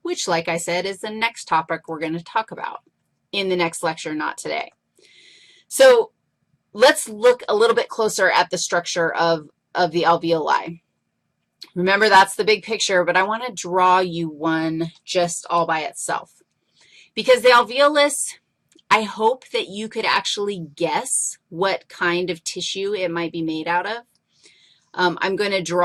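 No technical fault can be heard anywhere in this audio. Nothing in the sound calls for a time or a cause to be given.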